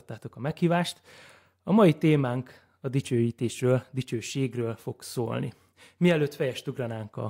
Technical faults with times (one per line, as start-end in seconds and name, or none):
none